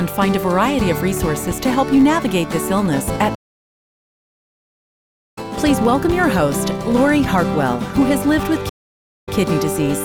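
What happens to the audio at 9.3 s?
A stream reconnect runs from 8.69 to 9.36 s. The connection dropped, leaving about 544 ms of silence, then a fresh decoder picked up mid-stream. Playback resumes 120 ms earlier, repeating a short stretch, with the first frame or two muted or fading in.

A filter restarted on every block also persists through this moment. The filter discards its state and starts each block from silence, adding a small transient each time. The result is a buzz at 86.1 Hz, which fits a 512-sample block, and it rises and falls with the signal's level.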